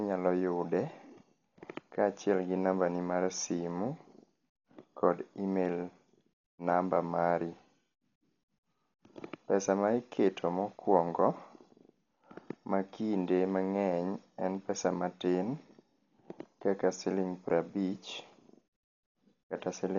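It's a speech clip, and the whole thing sounds dull and band-limited, with nothing above about 6.9 kHz, plus a rough, fluttery noise hanging around the voiced parts. That's heavy damage that points to Dolby Digital compression, likely at a starved bitrate, something like 40 kbps. At that rate the encoder narrows the band and leaves many frequency lines without mantissa bits, so the decoder fills those gaps with dither noise, which is the grit you hear.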